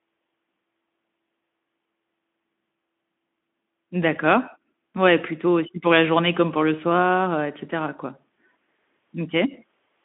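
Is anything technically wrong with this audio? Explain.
No, nothing here registers as a fault: the speech comes across a narrowband Speex voice link working as intended, with the band held to the usual telephone range.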